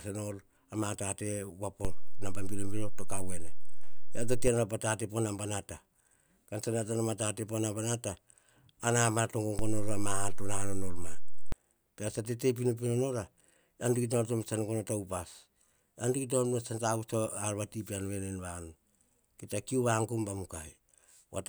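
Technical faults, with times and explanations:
1.85–4.48 s and 9.59–11.52 s, DC step: the waveform's zero line abruptly shifts by about -23 dBFS and then about -22 dBFS, holds, and returns just before "po tate" in the first case. Each jump is heard as a low thump or click while the speech carries on unchanged.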